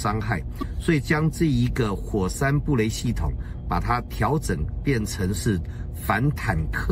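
From the first moment to the end, mains hum sits under the sound: a steady 60 Hz tone, roughly 20 dB below the signal, leaking in from the power line through a ground loop or nearby transformer. On a spectrogram it draws an unbroken horizontal line at 60 Hz with fainter lines at low harmonics.

Between 0.59 and 0.63 s, damaged data in a compressed stream makes the decoder misread the corrupted frames and lose sync while hunting for the next frame header. It is heard as a brief glitch, and shows as a 40 ms disturbance and a discontinuity in the waveform.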